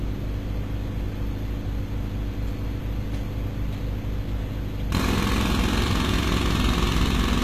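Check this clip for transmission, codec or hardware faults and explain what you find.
One codec fault is present across the whole clip. HE-AAC compression damage is plainly audible from start to end. The upper band is rebuilt rather than coded, likely by spectral band replication at a very low bitrate, around 20 kbps. Copied harmonics misalign, so the treble sounds gritty and metallic. Nothing remains above 14.9 kHz.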